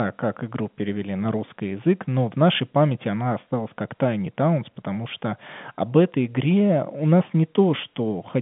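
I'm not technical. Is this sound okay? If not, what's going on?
Yes, nothing is going wrong in this recording. The speech has the narrow, slightly thin tone of an ordinary landline call, because G.711 telephone coding only carries sound between roughly 150 Hz and 3.5 kHz.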